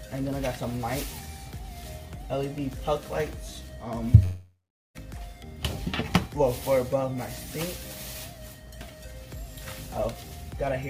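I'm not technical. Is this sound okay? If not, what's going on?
No. From 4.23 to 4.97 s there is a long network dropout: the connection likely stopped delivering audio for about 0.72 s. The player stretched the last sound into a fading buzz, went silent for about 0.41 s, then resumed with that stretch lost.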